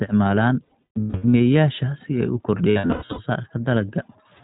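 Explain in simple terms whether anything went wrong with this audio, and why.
The whole clip runs through the iLBC codec, a phone-grade speech codec that cuts everything above 4 kHz, so the speech sounds muffled, a bit rough and slightly synthetic.

There are also lost iLBC frames from 0.64 to 1.41 s and from 2.70 to 3.20 s. Chunks of audio dropped out, and the decoder filled each gap by repeating the last bit of sound, which gives a held, buzzy smear. The longest gaps last around a tenth to a sixth of a second.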